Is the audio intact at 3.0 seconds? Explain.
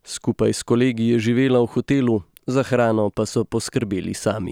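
Yes, the speech at 3.0 seconds is intact, with no fault present at that moment.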